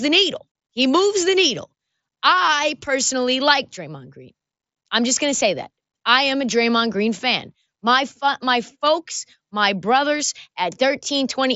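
No technical faults are audible.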